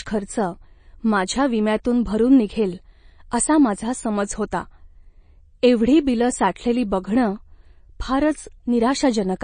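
From start to end, the speech carries plainly audible codec damage, likely from MP3 compression. Nothing is present above 9.4 kHz. That hard ceiling marks a treble cut by the encoder. The damage points to a low bitrate, around 32 kbps. At such a rate the encoder lacks bits for the full spectrum. It drops weaker frequency lines, and these switch on and off between frames. That leaves a watery texture across the speech.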